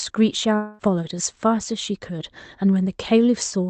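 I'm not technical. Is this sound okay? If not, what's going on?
No. From about 0.55 to 0.82 seconds, the speech was most likely cut by a long network dropout: the audio stopped arriving. The receiver filled the gap with a fading buzz or hiss stretched from the last sound, and that quarter-second of speech is missing.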